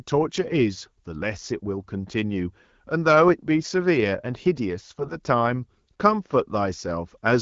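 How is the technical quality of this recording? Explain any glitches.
The recording is speech carried over a wideband mobile codec, with two short bursts of damage.

AMR bit errors, 0.44 to 0.61 s and 4.98 to 5.16 s: a few percent of the weakly protected bits in the codec frames arrived flipped while the frame checks still passed. The excitation pulses landed in the wrong places and the fine pitch, gain and spectral values went astray, so the speech briefly keeps its rough pitch and level but turns hoarse, scratchy and gargly. The HD Voice band is audible around both bursts, clear speech from the 12.65 kbit/s mode.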